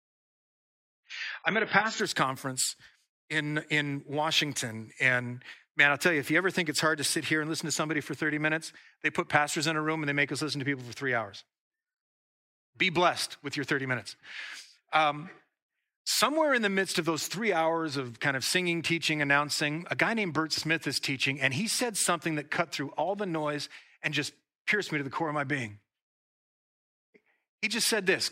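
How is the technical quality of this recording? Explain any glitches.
The recording has one glitch, confined to its opening two seconds.

From 0.0 to 2.0 s the audio shows an adaptive stream starting at a low bitrate. The player began on a low-quality version to start quickly, then switched up after measuring the connection. Until the switch, nothing above 7.5 kHz is present and codec artefacts are stronger, which fits a low-bitrate AAC encoding of around 16 kbit/s. At 2.0 s, just before "conference in in", the treble returns abruptly, consistent with a step to about 96 kbit/s. Unlike a network dropout or rebuffering, there is no gap or stall. Only the quality jumps, once, at the start.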